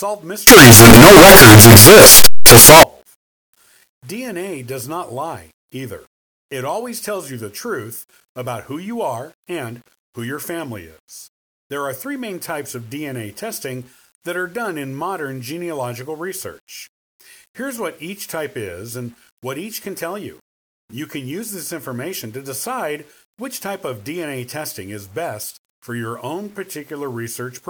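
From 0.47 to 2.83 s the speech collapses into loud, harsh distortion, likely signed and unsigned mixed up in 8-bit samples, so zero crossings become full-range jumps; the waveform fills the scale and the spectrogram smears broadband.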